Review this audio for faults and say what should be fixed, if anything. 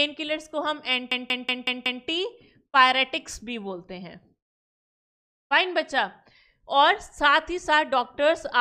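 From 1.12 to 2.04 s there is a system hang loop: while the computer stalled, the sound hardware kept replaying a 185.76 ms buffer, fitting an 8192-sample buffer, five times at 5.38 Hz. The result is a machine-gun stutter. Unlike a dropout or concealment repeat, every cycle is identical. Prevent it with a watchdog that mutes output when the buffer stops being refilled.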